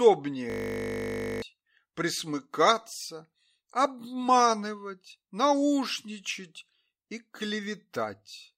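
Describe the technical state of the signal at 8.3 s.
At 8.3 s the signal is intact, with no dropout, clipping, distortion or other fault audible.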